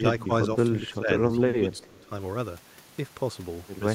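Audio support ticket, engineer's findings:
Speech suppressed in double talk, 0.80–1.09 s and 1.27–2.11 s: echo canceller likely unable to separate near talker from far-end echo, so both are attenuated. Speech dips in patches, deepest about 15 dB.

Echo leak, 1.78–1.86 s: residual echo likely passing the far-end loudspeaker's canceller. A faint delayed copy, about 30 dB below speech, trails by 335 ms.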